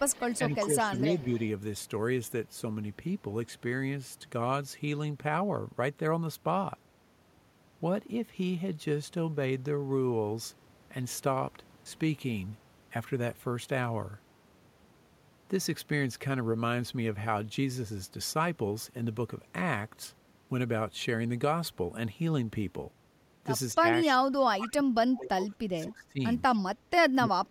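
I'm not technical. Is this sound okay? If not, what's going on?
No. Right at the start, from 0.07 to 1.38 s, a faint, delayed copy of the voice trails about a quarter second behind, with brief flickers again at 24.02 and 26.54 s. This is an echo leak, likely from a speakerphone whose echo canceller let its own playback slip back into the call.

The voice also dips at 0.38 to 1.17 s, only slightly, then drops out almost completely in patches from 23.74 to 26.21 s and again from 27.19 s to the end. This is speech suppressed in double talk, likely from the echo canceller muting the talker while both sides spoke at once.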